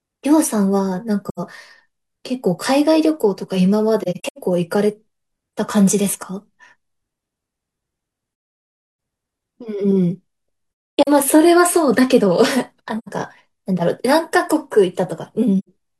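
The speech keeps dropping into soft-edged silences, classic AAC frame loss with muting: whole frames went missing and the decoder zeroed their spectrum, so the overlapping windows fade sound out and back in. Short holes land at 1.29–1.40, 12.99–13.08 and 15.59–15.69 s, each about 85 ms, which fits two lost frames. At 4.00–4.38 s the dropouts are scattered and choppy, and 11.03–11.08 s has about 300 ms missing. The worst is 8.30–8.98 s, nearly 0.7 s gone.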